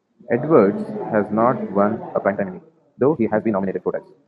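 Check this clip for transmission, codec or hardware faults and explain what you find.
One fault is present, a time-stretched section. From 1.92 s to the end, the speech suddenly runs 1.83 times faster with unchanged pitch. The cause is likely software shortening the audio to fit a length by discarding short pieces, so delivery sounds rushed.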